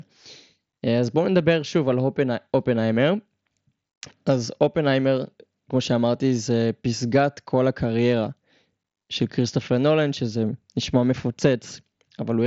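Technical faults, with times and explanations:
No technical faults are present in this speech clip. It comes through a Bluetooth mSBC headset codec working normally, so the speech band ends at about 7.7 kHz with only a light grain on the louder sounds.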